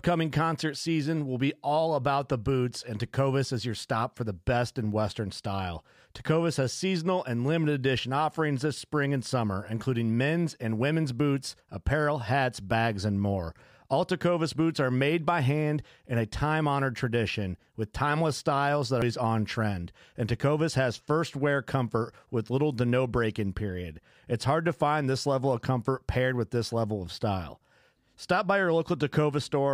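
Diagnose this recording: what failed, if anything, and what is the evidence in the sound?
The failure is at the codec stage: damaged data in a compressed stream. At 19.02 s, between "with timeless styles that" and "on trend", a brief glitch cuts in, as the decoder misreads corrupted frames, loses sync and resumes at the next valid frame header.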